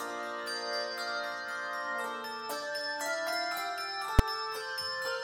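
A single sharp bang at 4.19 s, a very short, very loud hit. This is invalid numbers at full scale: a calculation produced infinite or invalid values, which clipped to the maximum and held the output pinned for about 5.8 ms, which fits a 256-sample processing block.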